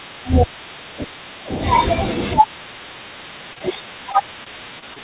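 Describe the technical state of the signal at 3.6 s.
A brief smear runs from 3.53 to 3.59 s, where the sound is carried on artificially for about 28 ms and then blended back in. That is short concealed packet loss: roughly 30 ms of audio never arrived, so the receiver extended the last sound from its pitch or as shaped noise.

Straight after, from 3.59 to 3.63 s, a sound is held slightly too long, with a faint buzz or dip. That is a short stall from a late packet: the jitter buffer ran empty, and the receiver stretched the audio for about 16 ms until the packet arrived. Nothing is lost there. The audio then resumes at the same point, still capped at 4 kHz by the call codec.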